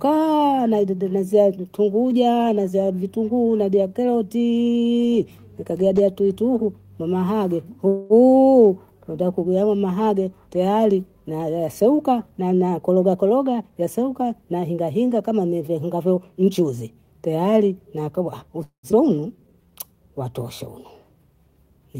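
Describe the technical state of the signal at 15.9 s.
At 15.9 s the signal is intact, with no dropout, clipping, glitch or other audible fault at that moment.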